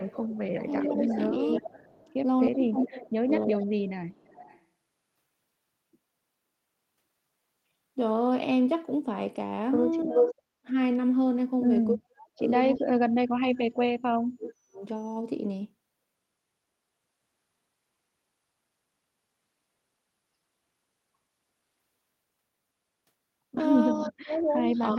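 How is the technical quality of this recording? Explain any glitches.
The recording has two recurring call-audio faults, both tied to the echo canceller on the call.

Echo leak: a delayed copy of the speech comes back from 0.00 to 4.62 s (334 ms late, about 15 dB under the speech), 10.01 to 10.33 s (352 ms, briefly about 5 dB louder than it), 12.75 to 12.82 s (358 ms) and 24.74 to 24.80 s (385 ms), the last two faint. The likely cause is a loudspeaker-side echo canceller letting through part of what its microphone heard.

Speech suppressed in double talk: the talker dips by about 15 dB between 0.79 and 3.70 s, drops by about 30 dB between 10.04 and 10.75 s, and nearly vanishes, about 40 dB down, from 11.93 to 14.82 s and from 23.93 s to the end. The canceller, likely unable to separate talker from echo during overlapping speech, turned both down.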